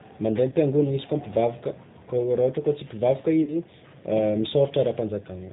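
Speech coded with the G.729 codec at 8 kbit/s sounds plainly rough and synthetic, and a spectrogram shows nothing above 4 kHz. Two stretches of VoIP packet loss concealed by the speech codec, at 0.49–0.55 s and at 3.44–3.56 s just after "tsy mpivavaka", each fit about 30 ms of missing audio. The decoder extends the last pitch and filter into a fading buzzy tone or coloured noise, which appears as a shrinking waveform envelope.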